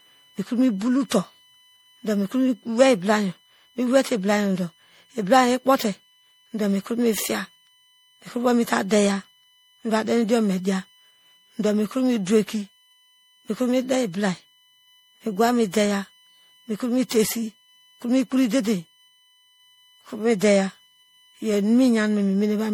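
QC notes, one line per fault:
throughout, USB whine: a steady tone at 1 kHz with its harmonics, loudest at 3 kHz, about 35 dB below the speech; flat horizontal lines across the spectrogram.
throughout, generation loss: smeared, swirly, hollow speech with blurred onsets, likely from about five repeated MP3 passes near 64 kbit/s; patchy spectral holes, smudged transients, nothing above 20.8 kHz.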